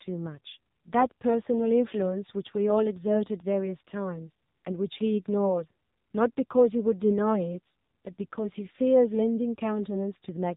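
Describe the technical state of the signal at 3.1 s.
At 3.1 s the speech is passing through the AMR narrowband mobile codec, as it does for the whole clip. The signal is cut off sharply at 4 kHz, so it sounds thin and telephone-like. The codec rebuilds the voice from a vocal-tract model excited by sparse pulses. Here the damage is heavy, which fits a low mode around 6.7 kbps. The result is a buzzy, synthetic tone with a smeared, robotic edge.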